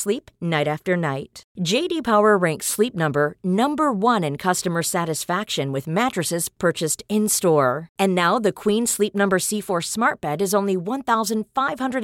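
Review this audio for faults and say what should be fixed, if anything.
Nothing should be fixed, as no faults turn up in this audio.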